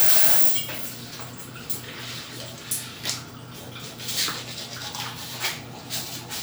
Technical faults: none

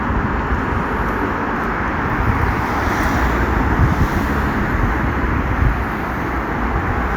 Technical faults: none

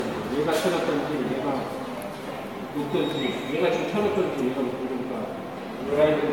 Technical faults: generation loss

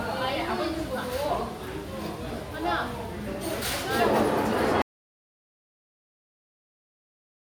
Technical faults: audio dropout to silence

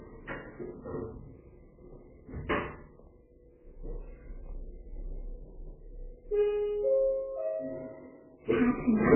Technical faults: MP3 compression

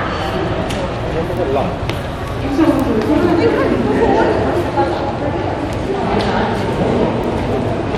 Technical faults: bit error spike

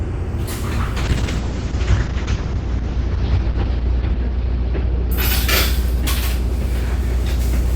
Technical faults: call bitrate drop

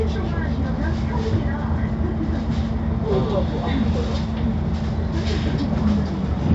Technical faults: none

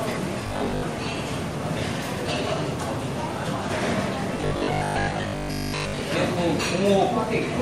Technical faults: robotic sound from repeated short buffers; corrupt frame decoded

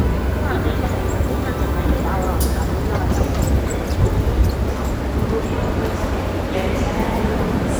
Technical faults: none

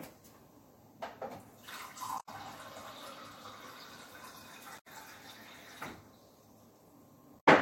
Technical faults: damaged data in a compressed stream

